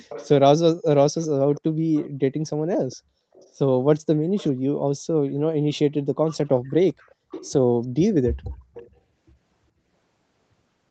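Faint delayed repeats of the speech come back at 0.09, 1.18, 1.96, 2.75, 3.33, 4.37, 6.28 and 8.33 s, the longest running from 6.28 to 7.52 s. Each trails the original by about 0.4 s and sits well below it, quietest around 3.3 s. That's an echo leak, likely from a far-end loudspeaker whose echo canceller let some of its mic pickup back into the call, which is also band-limited to 8 kHz.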